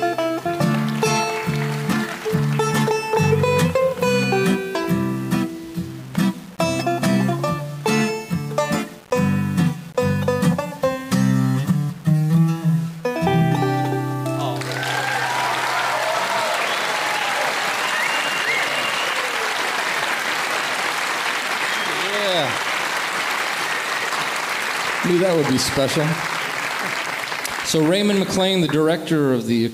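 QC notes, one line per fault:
Throughout: low bit depth without dither. Quiet passages take on a gritty, grainy distortion that tracks the sound itself, and the softest moments fall away to silence or sputter between adjacent levels. The error sits roughly 25 dB below the signal, consistent with rounding to about 6 bits. The likely cause is requantisation with no dither, so the rounding error stays correlated with the waveform.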